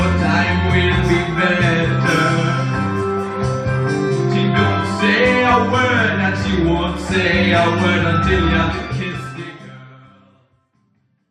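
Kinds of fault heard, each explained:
Nothing here sounds wrong, and the gentle fade-out over the last few seconds is just the sort of smooth ending an editor would add.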